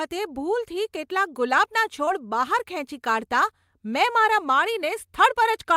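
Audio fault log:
2.05–2.09 s, short concealed packet loss: about 20 ms of the speech arrived too late for the decoder, so the receiver extended the preceding sound to cover the gap and then cross-faded back into the real signal, leaving a brief smear or wobble.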